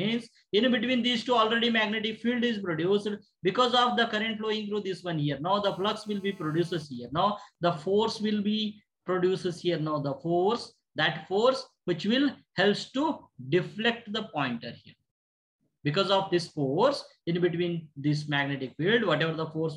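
From 5.65 to 6.83 s the audio carries GSM phone buzz: a nearby 2G phone in a call pulses its transmitter about 217 times a second, and the audio circuitry rectifies those pulses into a hard, raspy 217 Hz buzz about 30 dB below the signal. On a spectrogram it is a stack of evenly spaced harmonic lines at multiples of 217 Hz; the waveform shows a regular comb of spikes. From 6.83 to 7.56 s GSM signalling bursts follow, with the phone still in the call while its user is silent. This is a run of even ticks with a longer buzz twice a second, quieter at roughly 40 dB down, that appears as short, gapped clusters of vertical lines on the spectrogram.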